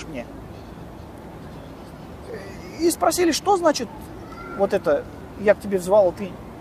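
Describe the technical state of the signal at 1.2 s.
At 1.2 s the signal is intact, with no dropout, clipping, distortion or other fault to be heard at that point.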